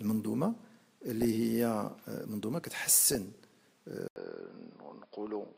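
DAB burbling appears first from 1.08 to 1.25 s, again from 2.65 to 3.38 s, and briefly from 5.27 to 5.32 s. Weak reception lets bit errors, at a rate of a few tenths of a percent, slip through error correction into the MP2 data. Corrupted samples put short noise blips into individual sub-bands, and corrupted scale factors make sub-bands leap in level for up to a frame. Unlike dropouts or clicks, the signal never vanishes. It churns in narrow bands, frame by frame, and the longer middle burst runs across many frames.

At 4.08 s an 80 ms silence is followed by a duller, boxier sound that lasts to the end. Nothing reaches above 5.2 kHz, the level sits about 5 dB lower, and a new noise floor appears about 45 dB below the signal. The likely cause is an input switched to a poorer device mid-recording. A plain low-pass filter or codec downgrade would not explain the gap, the changed noise and the level step arriving together.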